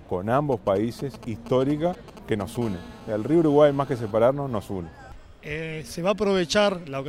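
GSM signalling bursts run from 0.52 to 2.57 s: a galloping dit-dit-dit of brief 217 Hz buzzes, around 15 dB below the audio, as a nearby 2G phone transmits short radio bursts while signalling and the audio circuitry rectifies them into audible pulses. GSM phone buzz follows from 2.62 to 4.11 s, a steady, raspy 217 Hz buzz rich in harmonics and unrelated to the sound, about 23 dB below it. It comes from a nearby 2G phone in a call, transmitting continuously at its 217 Hz burst rate, with each radio pulse demodulated by the audio path.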